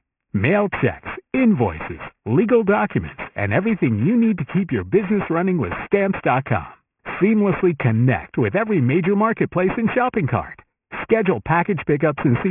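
Aliasing runs through the whole recording, from start to finish. The speech was brought down to a much lower sample rate, which points to a drop from 48 kHz to about 6 kHz, without an anti-aliasing filter first. Everything above the 3 kHz fold point mirrors back below it as false, unrelated tones, roughly 15 dB under the signal. Sibilants turn gritty and metallic, and the spectrum stays dense right up to the 3 kHz edge.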